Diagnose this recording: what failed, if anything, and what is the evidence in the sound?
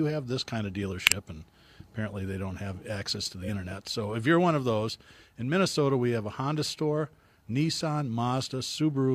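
A corrupt frame was decoded at 1.06 to 1.13 s, right after "have this kind of", in the codec stage. A single damaged frame played through with misread gains and codes, throwing energy to the wrong frequencies as a sharp burst.

Compressed frames were skipped at 3.39 to 3.50 s, just after "don't have access to", again a codec or storage fault. Roughly 50 ms of speech never plays, so the audio jumps ahead.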